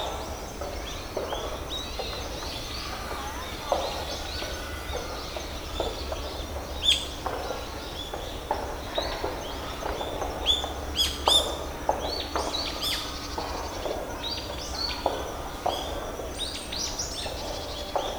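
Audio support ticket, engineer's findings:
No faults found on listening; nothing to escalate.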